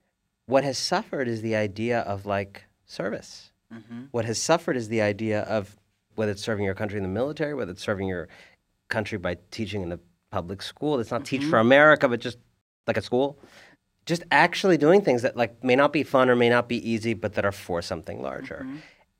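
A speech recording with a playback stall from 12.61 to 12.84 s: the audio cuts to silence for about 230 ms mid-flow, likely from the player running out of buffered data or a blocked output thread. Time-compressed catch-up follows from 12.84 to 13.28 s, with the speech hurried to roughly 1.5 times normal speed at unchanged pitch, from small cross-faded cuts used to drain the backlog.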